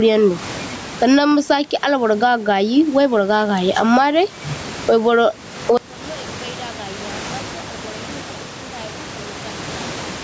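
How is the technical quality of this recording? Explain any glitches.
The recording is marred by gain pumping throughout. The input gain is likely set far too high, so a fast limiter clamps down on every loud syllable and releases in the pauses. The room noise sits about 32 dB below the speech, and the gain swings by about 15 dB. The speech sounds squashed. The call's microphone processing passes nothing above 8 kHz.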